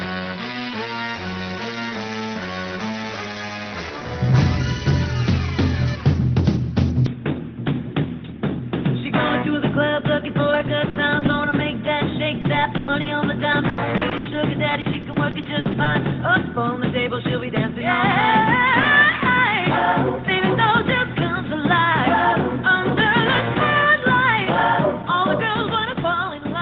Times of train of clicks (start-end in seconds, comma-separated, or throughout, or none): none